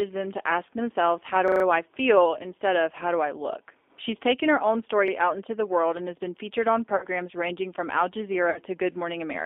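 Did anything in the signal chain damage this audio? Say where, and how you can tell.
Yes. Damage comes from three stages: the speech codec, the playback buffer and the network.

The G.729 codec sits across the whole recording. The speech is confined to a telephone band of about 300 Hz to 3.6 kHz, and the coding damage is plainly audible: a rough, slightly synthetic texture, which fits an 8 kbit/s G.729-family codec. The voice is rebuilt from a filter and a few excitation pulses per frame rather than the original waveform. On a spectrogram, nothing appears above 3.6 kHz, and the harmonics look smeared and grainy.

A repeated buffer at the driver or buffer stage causes two stutters. From 1.48 to 1.64 s, just before "I feel instead of", one short slice plays several times over. At 5.08 to 5.12 s, between "taken her own" and "out into the world", a slice repeats once. When new audio missed its deadline, the device replayed its last block, and the repeat spacing points to a 40 ms buffer. 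On the waveform, identical 40 ms segments sit side by side with hard joins at each repeat.

VoIP packet loss concealed by the speech codec shows up at 6.96 to 7.06 s, between "has been featured on" and "ranging from", and again at 8.50 to 8.58 s. About 60 ms of audio went missing each time. The decoder filled the gap by extending its last pitch and filter settings, which stretches the sound into a buzzy tone or coloured noise that fades as its gain drops. A spectrogram shows the stretched sound dimming, and the energy stays weak briefly after the speech resumes.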